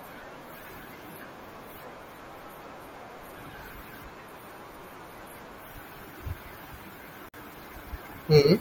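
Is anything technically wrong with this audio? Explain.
Yes. At 7.29 s the speech drops out for about 52 ms, ending at 7.34 s, and then resumes exactly where it left off. This is a gap at a join of encoded pieces. The audio was encoded in separate segments and spliced back together untrimmed, so the encoder's start-up delay and its padded final frame remain as dead air between them. On a waveform this shows as a flat, near-empty strip with smeared edges. On a spectrogram it is a narrow vertical blank band, its borders slightly blurred by the codec.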